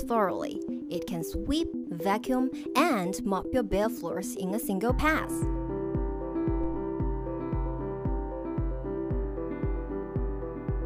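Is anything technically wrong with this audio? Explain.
Yes, there is one fault. Phantom power thump, from 6.64 to 6.92 s: a supply was switched on or off on the live input, and the voltage step passed through the coupling capacitors as a deep low thump, peaking at about -24 dBFS and dying away over roughly 63 ms.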